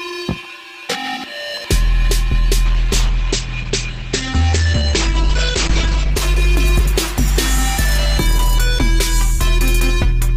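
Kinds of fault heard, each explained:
Call bitrate drop: from about 2.66 s to 7.93 s the encoder gets squeezed from 64 kbps down to 10 kbps, sitting at the bottom for about 3.2 s, so everything goes coarse and watery, and the top end gets chopped from 20 kHz to 8 kHz, leaving it muffled until it recovers.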